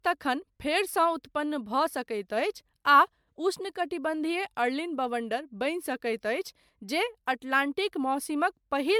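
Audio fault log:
Throughout: generation loss. The speech sounds swirly, smeared and hollow, and consonant attacks blur. This is likely from repeated MP3 encoding, around seven passes, each requantising on a shifted frame grid. It fits a 128 kbit/s chain, with nothing above 20.1 kHz.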